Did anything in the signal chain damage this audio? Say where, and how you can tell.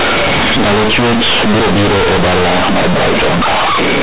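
Yes. The damage is at the sample-format conversion: companded audio read as linear. A-law bytes are played as plain 8-bit samples without expansion, so the speech is loud, buzzy and distorted throughout, with heavy noise in pauses. Simple clipping would leave the pauses quiet.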